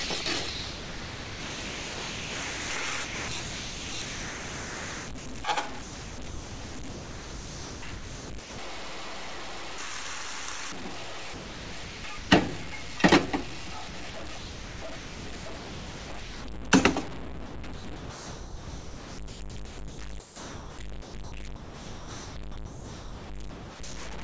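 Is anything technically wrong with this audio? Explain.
Yes. Throughout, there's a gritty, signal-following graininess with noise only about 10 dB below the sound, likely low bit depth without dither, consistent with 6-bit truncation.

The sound is also chopped by the voice detector at 0.04–2.70, 3.04–5.26, 5.82–8.58, 11.34–12.30, 13.88–16.44 and 17.46–23.80 s. Chunks are likely swapped for comfort noise. The G.722 call path caps everything at 8 kHz.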